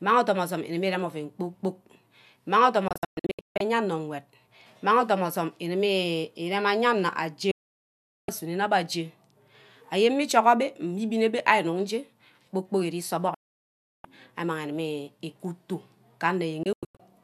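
The speech snaps to silence four times: several short holes from 2.88 to 3.61 s, solid gaps at 7.51 to 8.29 s and 13.34 to 14.05 s, and brief holes from 16.63 to 17.02 s. This is digital broadcast dropout. The receiver lost good frames and muted until they returned, so that audio is gone.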